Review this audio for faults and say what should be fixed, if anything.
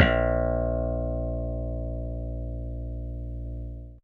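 Nothing needs fixing, as the signal holds steady throughout with no audible technical faults.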